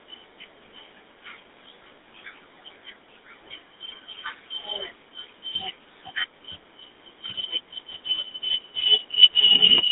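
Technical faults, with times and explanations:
Throughout, GSM full-rate codec: the speech was rebuilt from a vocal-tract filter driven by a coarse, regularly spaced pulse excitation, leaving a plainly audible buzzy, gravelly roughness, with the band confined to 250 Hz to 3.7 kHz. The coarseness fits a 13 kbps stream.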